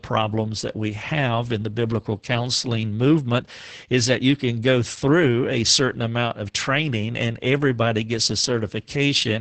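Throughout, Opus voice compression leaves the speech muffled, hoarse and faintly robotic. The spectrogram is empty above 8.8 kHz, and the coarse texture points to a bitrate near 10 kbps.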